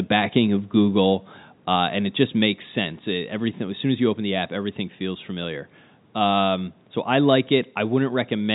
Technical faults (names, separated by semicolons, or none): none